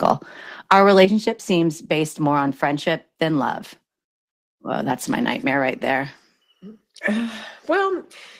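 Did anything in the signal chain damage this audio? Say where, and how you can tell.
Yes. The loudest moments crackle with a harsh, flattened edge, first briefly from 0.05 to 0.12 s and then more heavily from 0.71 to 1.05 s, just before "seems based more on". This is microphone overload at the converter, likely caused by an input level set too high. The peaks run past full scale, by about 3 dB in the first burst and about 6 dB in the second, so their tops are cut flat. About one percent of samples are clipped in the first burst and about 1.5 percent in the second, and those squared-off tops add the gritty distortion.

At 1.05 s, immediately after the heavier clipping and right before "seems based more on", the sound and its background drop together by about 7 dB in a single step. This is a microphone volume stepped down in the call-processing stage, likely the call software reacting to the overload by cutting the device's input gain. 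Because everything falls at once with no fade, and the drop lands just after the distorted peak, it points to an automatic gain correction rather than a change in the source.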